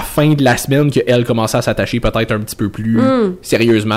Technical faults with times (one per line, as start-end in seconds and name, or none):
0.00-3.96 hard clipping